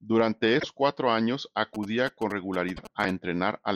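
At 0.56 s the speech breaks up until 0.65 s. This is damaged data in a compressed stream. Some bytes in the encoded audio were lost or overwritten. The decoder misreads the frames there and loses sync. It then hunts for the next valid frame header.

From 1.75 s to 3.11 s a GSM signalling burst pattern runs under the speech. A 2G phone nearby is exchanging short radio bursts with the network, as happens before a call or text. The audio circuit rectifies that radio energy into sound. The result is a galloping dit-dit-dit of short buzzes at 217 Hz, about 15 dB below the speech.

At 2.73 s, inside that buzzing, a second corrupted stretch appears, ending at 2.79 s. Again the decoder stumbles on bad frames and resyncs. It gives another quick blip.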